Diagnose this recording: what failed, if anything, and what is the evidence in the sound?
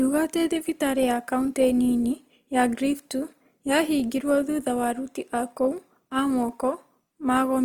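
Opus compression, throughout, at the codec stage: the speech turns rough and grainy rather than swirly, yet still reaches 20.2 kHz, which fits fullband CELT mode near 24 kbps. Short of bits, the encoder likely filled starved bands with folded or noise-like energy.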